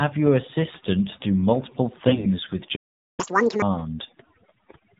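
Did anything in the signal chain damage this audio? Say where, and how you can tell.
Yes. Processing: overdone noise removal runs throughout. The background collapses to near silence with twinkling specks. The suppressor was set too aggressively, gating individual frequency bands down whenever they approached its noise estimate, and quieter speech components went with them.

Codec: the whole clip carries the AMR narrowband mobile codec signature. Nothing above 4 kHz survives, and the speech is plainly buzzy and synthetic, which fits a low mode around 7.4 kbps. A vocal-tract model excited by a few pulses per frame cannot rebuild natural voicing at that rate.

Network: AMR bit errors hit from 2.08 to 2.27 s. The speech keeps roughly its pitch and level but turns hoarse, scratchy and gargly. Flipped bits in the less-protected part of the frames, at roughly one bit in ten, misplace the excitation pulses and corrupt gain and spectral detail.

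Playback: a playback stall silences the output from 2.75 to 3.20 s, about 0.42 s, cutting the speech mid-flow. The player most likely ran out of buffered data or had its output thread blocked, and it produced nothing until it recovered.

Playback: catch-up at higher speed follows from 3.20 to 3.62 s. The audio runs at double speed with pitch raised by around ten semitones, then drops back to normal. The player resampled its backlog faster to recover the time lost in the stall.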